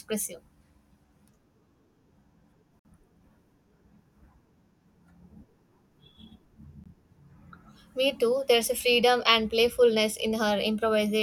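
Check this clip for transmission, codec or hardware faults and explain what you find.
Two gaps between stream segments. From 2.79 to 2.85 s, about 56 ms of hard-edged silence cuts into the speech. An 18 ms hole follows at 6.84 s. Segment timestamps leave small holes about 4 s apart, and the player fills them with silence. No audio is lost; it is delayed.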